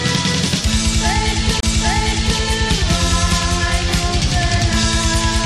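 Right around 1.60 to 1.63 s there's a CD skip. A knock or a flaw sent the laser onto another turn of the spiral, so you get a brief mute of about 30 ms. Then playback picks up from a different spot, jumping ahead or back.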